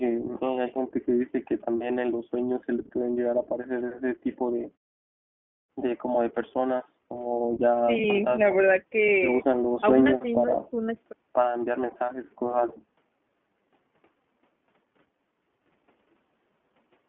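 iLBC codec damage runs through the whole speech clip: the narrowband line band keeps only about 200 Hz to 3.4 kHz. Each frame's excitation is coded independently, in frames that point to 20 ms, at the rough, synthetic grain of the 15.2 kbps mode. The pauses fall to silence between phrases.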